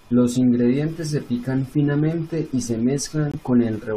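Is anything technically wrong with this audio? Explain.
Yes, there's one fault. At 3.32 to 3.35 s, right after "pican finamente y se", a corrupt frame gets muted. Some bits in a compressed frame were flipped, the decoder rejected that frame, and the player dropped silence in its place. You hear the speech cut out abruptly for about 38 ms and then pick up again. A gap that short points to a single lost frame, and the timing around it stays intact.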